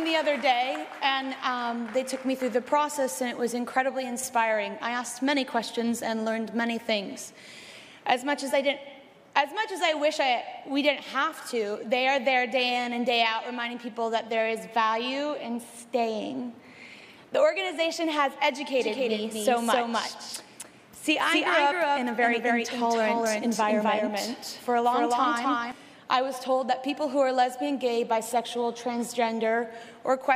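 From 18.80 to 25.72 s a second, equally loud copy of the sound runs about 300 ms behind, dry and full-band, cutting in and out abruptly. This doubled audio track is likely a second capture through a slower path.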